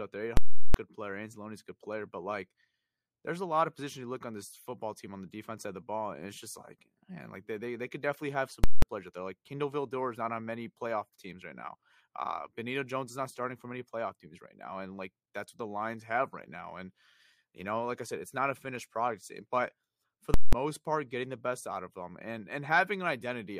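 Invalid numbers at full scale hit this speech at 0.37 to 0.74 s, 8.64 to 8.82 s and 20.34 to 20.53 s. A calculation went infinite or undefined, and the output was pinned at the largest possible value for a whole processing block, about 370 ms first and about 186 ms twice after, which fits blocks of 16384 and 8192 samples. Each event is a violent pop on entry and exit with dead silence between.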